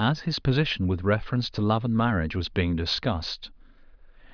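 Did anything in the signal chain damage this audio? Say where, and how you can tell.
No, nothing along the way seems to have harmed this speech recording, and I can't point to any spot where something went wrong.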